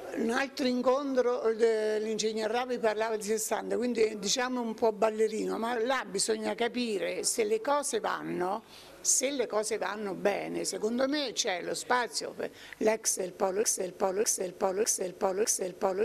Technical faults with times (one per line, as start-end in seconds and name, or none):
13.63-16.05 broken-record loop